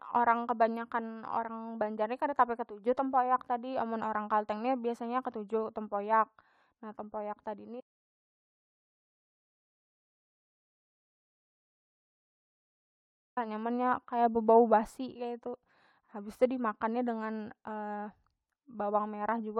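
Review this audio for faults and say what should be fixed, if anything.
An audio dropout to silence runs from 7.81 to 13.37 s, after "nah tempoyak tadi ni" and before "nyamannya kaya bebau basi". About 5.6 s of speech is lost to silence, likely from a lost input. Unlike a noise gate, it leaves no room tone. Secure cables and links and monitor input levels during recording.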